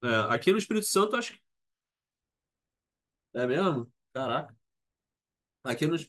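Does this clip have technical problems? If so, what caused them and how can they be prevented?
No, this clip has no technical problems, so there is nothing to prevent.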